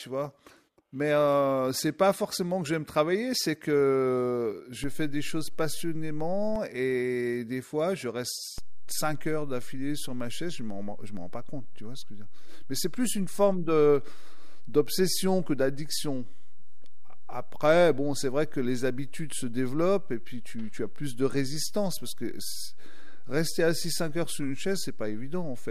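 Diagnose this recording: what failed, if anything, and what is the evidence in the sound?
A DC step fault sits at the converter or analogue input stage. The waveform's zero line jumps by about -27 dBFS at 4.84 s and returns at 6.56 s. It jumps again at 8.58 s and holds to the end of the recording. Each transition is a low thump under the speech, which carries on unchanged in level and tone. This fits an offset being switched into the input path or a converter recalibrating its baseline.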